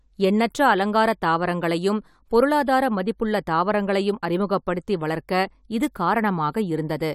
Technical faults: none

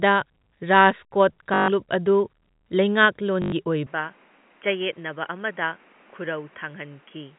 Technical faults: packet loss with last packet repeated; input switched to a poorer device

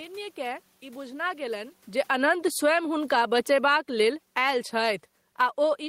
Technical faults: automatic gain falling

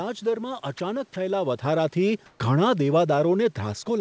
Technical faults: sound dropped by the voice detector; comfort noise in place of the background

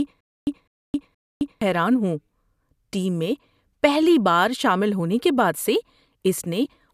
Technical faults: stutter with silent gaps

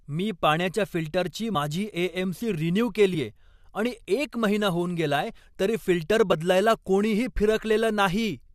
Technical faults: compressed frames skipped

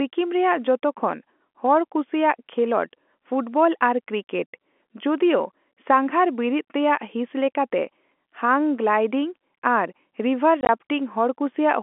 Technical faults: packet loss filled with silence

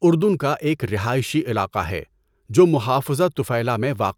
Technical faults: none

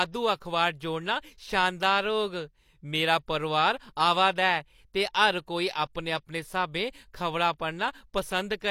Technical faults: pre-echo

